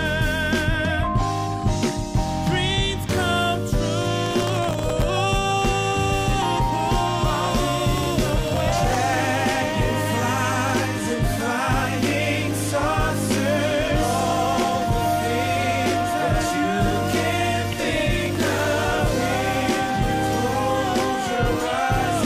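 From 4.26 to 5.03 s, and again from 7.98 to 9.26 s, you get processor overload crackle: the machine couldn't finish its tiny audio buffers on time, missing dozens of deadlines over a short stretch, and each miss replayed a scrap of stale audio with hard edges. The grain is very fine, which points to buffers well under a millisecond, so it comes across as a gritty tearing riding on the sound that stops cleanly once the load eases.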